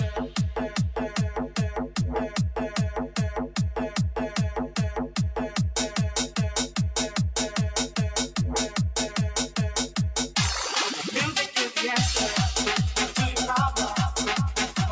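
From start to finish, a noise suppressor applied to music or sounds is acting on the audio. Tuned for speech, it reads sustained tones, room ambience and reverberant decay as noise and pulls them down, while sharp onsets pass largely intact. The gain rides up and down by about 5 dB, so held material and tails sag after each attack and the sound pumps and thins. The band stops at 8 kHz, consistent with the call microphone processing.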